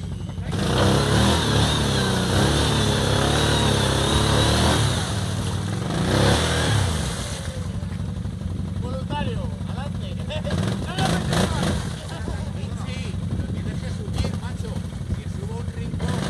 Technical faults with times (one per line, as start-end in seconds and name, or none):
none